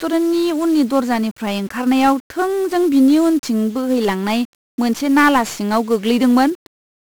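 1-bit DFPWM compression runs through the whole of this speech clip, from the first moment to the end at about 7 s. Each sample carries a single bit that only tells an adaptive level to rise or fall, so the waveform is traced as a staircase of small steps rather than captured directly. The resulting quantisation noise is heavy and broadband, giving the speech a constant fuzzy, crackling texture and burying the treble under hiss, damage that fits a 1-bit stream at around 48 kbps.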